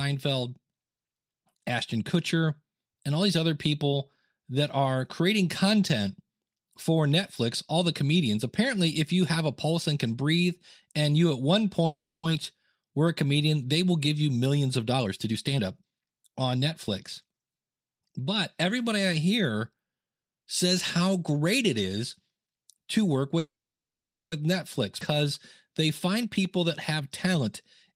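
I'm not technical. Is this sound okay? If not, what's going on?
No. At two points the call had to stop and then catch up, and it shows in the sound.

Call audio freeze: Delivery of the sound most likely stalled, so the receiving end ran out of audio to play. From 11.85 to 12.25 s it stretched the last bit of sound into a short fading buzz, then went quiet for about a quarter of a second. From 23.39 to 24.34 s the same thing lasted almost a second, mostly silence. The sound then carries on where it stopped, so nothing is lost, but there is a noticeable pause.

Jitter buffer speed-up: After each hold-up, the receiver had a backlog of sound waiting and played it faster to get back in step. It trimmed tiny slices out again and again, which keeps the pitch normal but rushes the pace. From 14.86 to 17.62 s it runs at 114% speed, removing roughly 0.4 seconds in total. From 26.08 to 27.48 s it runs at 108%, removing about a tenth of a second. 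Both stretches sound hurried.

Skip ahead: Around 25.00 to 25.03 s, a piece of sound was thrown away while newer sound was already queued, and playback jumped straight past it. Roughly a third of a second is missing, and the sound on either side is joined almost directly. The jump is abrupt, and whatever was said in that gap cannot be recovered.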